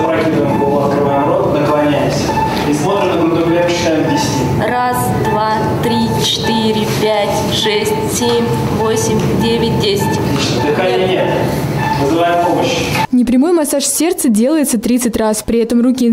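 No technical faults occur at any point in the audio.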